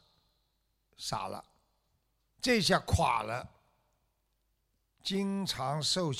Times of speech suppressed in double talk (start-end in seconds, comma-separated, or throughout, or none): none